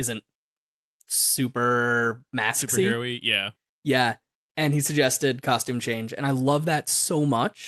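No technical faults can be heard anywhere in this speech recording. It has passed through a call path whose codec limits the top end to around 12 kHz, which fits Opus, and that path is working as it should.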